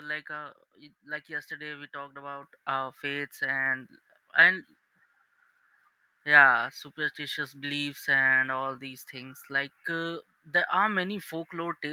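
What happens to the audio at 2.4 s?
At 2.43 s, between "like yesterday we talked" and "our faiths", the microphone volume is stepped up: the input gain is raised by about 7 dB in a single jump, so voice and background noise become louder together mid-phrase.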